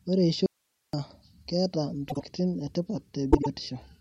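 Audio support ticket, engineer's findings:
Audio dropout to a faint residue, 0.46–0.93 s: signal cut abruptly for about 473 ms, gap holds only hiss roughly 50 dB down. Likely upstream signal loss with downstream path still live. Hard edges and a live noise floor rule out a pause or fade.

Frames out of order, 2.09–2.23 s and 3.31–3.47 s: brief garbled flutter, from adjacent 52.2 ms blocks swapped, consistent with two-frame runs decoded in the wrong order. No time is lost, which separates it from dropped frames.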